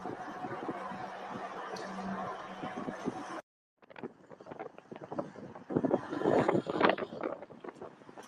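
A speech-oriented noise suppressor runs on this sound throughout, treating sustained tones and tails as noise, so the level pumps with swings of around 10 dB. From 4.69 to 4.91 s and again from 7.72 to 8.14 s, the noise suppressor cuts the sound, dropping it by up to about 4 dB.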